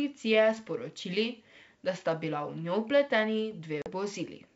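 At 3.82 s, packet loss on the ADPCM call drops about 40 ms of the G.722 wideband stream, roughly two packets, leaving the decoder's predictor and step size out of step with the sender's. The speech cuts to a hard-edged silence, then resumes disturbed until recovering by 3.93 s.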